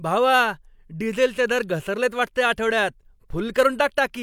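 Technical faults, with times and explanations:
No technical faults heard anywhere in the speech recording.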